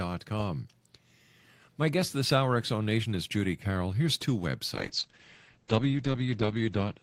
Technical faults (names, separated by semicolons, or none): call bitrate drop